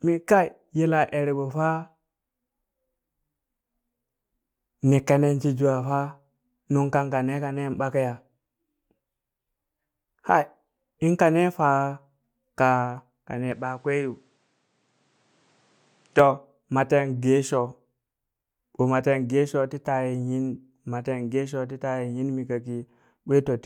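From 13.52 s to 16.19 s the speech abruptly turns duller and a few decibels quieter, with a faint new noise floor roughly 40 dB down, then switches back cleanly; there is no gap at either switch. This is most likely the input switched to a poorer device mid-recording. On a spectrogram the energy above 9.8 kHz is cut off sharply across that span, while the waveform shows a visibly lower envelope between the two switch points.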